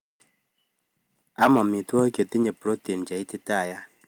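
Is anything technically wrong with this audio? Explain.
Yes, two things stand out. From 1.42 to 1.62 s there's a harsh, crackly edge on the loudest speech, likely microphone overload: input about 9 dB too hot, with about 4% of samples flattened. Then at 2.43 s everything drops by about 3 dB at once, likely the microphone volume being stepped down automatically after that clipping.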